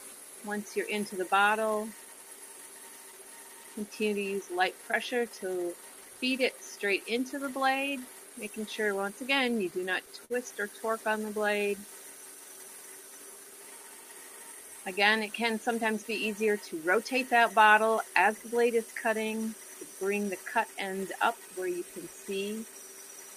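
Between 9.49 and 10.33 s the audio shows repeated stalls (stutter): four short hiccups where packets arrived late, the jitter buffer ran dry, and the receiver stretched the last sound to cover about 80 ms in total, longest 51 ms. Nothing is lost, but the passage drags unevenly.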